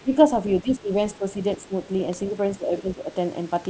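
Speech suppressed in double talk, likely an echo canceller mistaking the talker for loudspeaker echo, pulls the speech down by about 10 to 15 dB in brief, choppy dips at 0.02–0.16, 0.63–0.91, 1.18–1.36, 1.68–1.72 and 2.58–3.14 s, the last being the longest.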